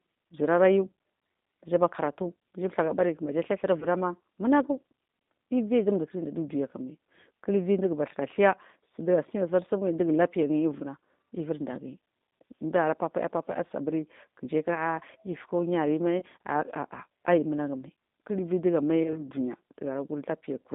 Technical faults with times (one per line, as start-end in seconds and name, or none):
0.00-20.74 G.729 codec
3.80-3.86 VoIP packet loss concealed by the speech codec
16.20-16.24 VoIP packet loss concealed by the speech codec
19.03-19.23 VoIP packet loss concealed by the speech codec